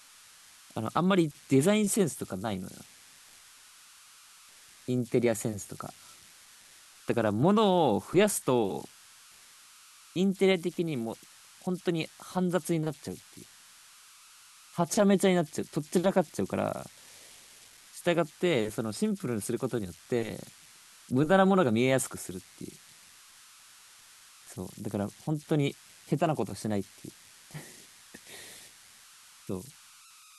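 A whistle of around 1.5 kHz sits in the pauses of this speech clip from start to end, with grainy noise beneath quieter passages at about 25 dB below the signal. These are converter idle tones: an undithered delta-sigma converter cycling through repeating bit patterns on small inputs.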